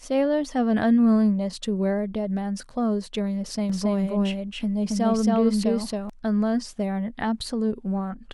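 From 3.7 to 6.1 s, a doubled audio track: a dry copy at similar level trails by about 300 ms, likely captured again through a slower path.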